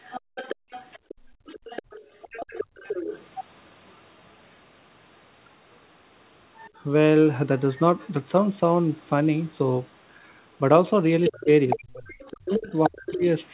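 From the start to 3.27 s, an echo canceller that likely failed to remove the loudspeaker signal lets the other side's voice leak through, sitting roughly 15 dB under the talker. Faint scraps of the same leak return at 4.49 s, 6.55 to 6.7 s and 7.59 to 8.09 s, well down in level.

Between 0.21 and 1.46 s the canceller also clamps the microphone while the far end plays, so the background is gated by the echo canceller. The room sound drops away by up to about 38 dB in brief holes totalling roughly 0.7 s, then springs back.

From 11.22 s to the end the leak is strongest, nearly as loud as the talker. From 11.29 to 13.25 s both sides speak at once, and the canceller likely mistakes the talker for echo. This speech suppression in double talk pulls the voice down by as much as 35 dB over about 1.5 s in all.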